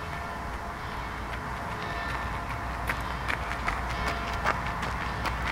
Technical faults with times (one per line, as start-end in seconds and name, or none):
none